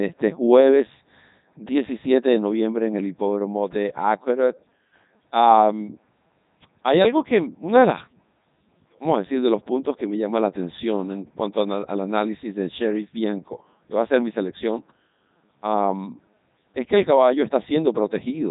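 Throughout, the Codec 2 vocoder rebuilds the speech from pitch and envelope data, at a rate that fits 3.2 kbit/s: heavily robotic, buzzy, nothing above 3.8 kHz.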